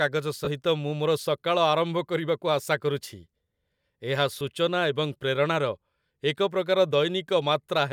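At 0.45 to 0.48 s, lost LE Audio frames cause a 22.5 ms gap, consistent with three 7.5 ms LC3 frames. The decoder conceals it by replaying the last spectrum with scrambled signs, so the sound turns into a brief noisy smear. A single 7.5 ms loss at 4.40 s produces a shorter smear of the same kind.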